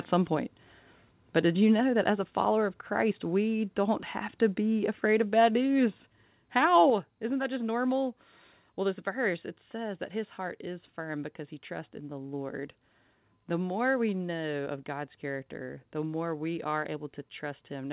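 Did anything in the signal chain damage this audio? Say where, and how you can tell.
Yes. The damage happens at the call-processing stage as a microphone volume stepped down three times. The level of the speech and the background drops abruptly by about 2 dB at 1.8 s (between "did you" and "that as a follower"), by about 2 dB at 5.88 s (after "be afraid of bad"), and by about 5 dB at 6.9 s. The likely cause is automatic gain control lowering the device's input volume in single steps. On a waveform the envelope shrinks instantly at each time, and on a spectrogram every band darkens at once. The G.711 call path shows as nothing above 4 kHz.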